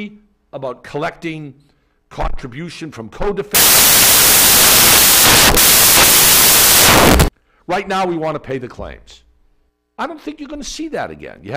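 From about 3.55 s to 7.28 s, the reader builds the samples from the wrong bytes, misaligned by a byte or with their order swapped, so each value is assembled incorrectly. The rapidly changing low-order bits end up as the most significant part of every sample, so that stretch of the audio turns into loud, harsh broadband noise, close to white on the loud sounds. The original audio is present outside that span.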